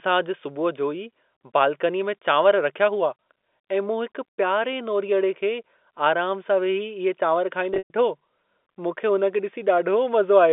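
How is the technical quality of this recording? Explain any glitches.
The recording has one clear glitch, a patch of packet loss with pitch repetition between 7.74 and 7.94 s. Across that 200 ms stretch about 160 ms of audio went missing in scattered gaps, which fits 20 ms packets being dropped. The receiver filled each hole by looping the last pitch period and fading it out. The brief gaps sound like a held, buzzy tone. The longest run, 120 ms, fades toward silence before the sound returns through a short cross-fade. The whole call sits in a narrow telephone band of roughly 250 Hz to 3.6 kHz.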